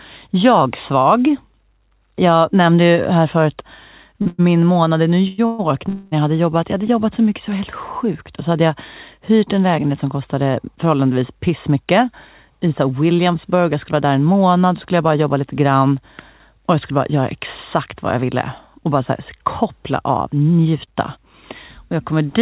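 Speech heard through a call link with nothing above 4 kHz, which fits a G.711 A-law codec, shows jitter-buffer trouble. From 4.22 to 5.61 s, just after "nämnde ju här förut", packets kept arriving late, so the buffer ran dry five times. This produces repeated stalls (stutter): the receiver stretched the last sound over gaps of up to 127 ms, about 0.4 s in all and 29% of that span, so the speech drags and stutters with nothing lost. From 5.89 to 6.14 s a call audio freeze, likely from packets held up in transit, fills 231 ms by continuing the last sound without going silent, then resumes where it stopped. Later the buffer held excess audio and trimmed it as a jitter buffer speed-up. From 11.34 to 14.27 s, between "lägenhet som kostade förhållandevis" and "skulle jag bara jobba", playback runs at 107% speed. From 16.50 to 22.13 s, after "bara jobba lite grann", it runs at 104%. Each stretch loses roughly a fifth of a second, so the speech runs faster at unchanged pitch, and the 107% stretch sounds hurried.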